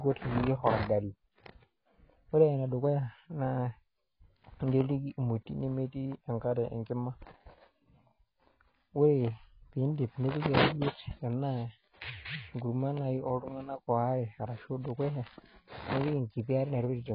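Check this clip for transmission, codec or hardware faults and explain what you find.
The speech carries one codec fault from start to finish: heavy damage most likely from AAC compression. Nothing is heard above about 5.2 kHz, so sibilants lose their top and sound dull. Starved of bits, the encoder quantises each frame's spectrum coarsely, leaving gaps that warble and fizz on sustained sounds. A damage level like this fits a bitrate near 16 kbps. The smeared, swirly texture inside the band is what separates it from a plain low-pass filter, which only removes the top.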